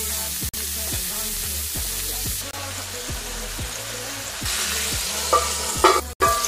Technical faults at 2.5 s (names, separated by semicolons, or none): corrupt frame muted